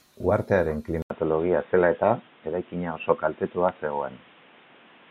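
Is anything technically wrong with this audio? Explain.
Yes. From 1.02 s to the end, the speech turns dull and boxy after an 80 ms silence, with nothing above 3.8 kHz, a new noise floor roughly 30 dB down, and level unchanged. This is likely an input switched to a poorer device, whose narrower band cuts the highs.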